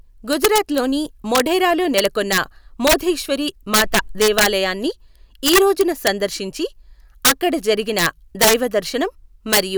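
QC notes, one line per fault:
Throughout, integer overflow: peaks driven about 10 dB past the integer limit wrap to the opposite sign instead of being limited, flipping across the full range. Under one percent of samples exceed it, so loud moments in the speech erupt in violent cracks, far harsher than clipping.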